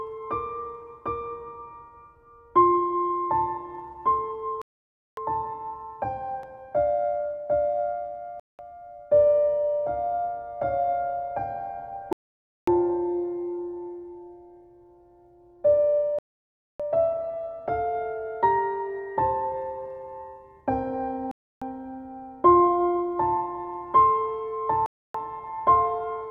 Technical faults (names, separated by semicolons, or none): Bluetooth stall